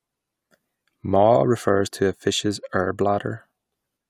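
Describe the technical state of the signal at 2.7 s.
At 2.7 s the speech signal is intact, with no audible fault at that moment.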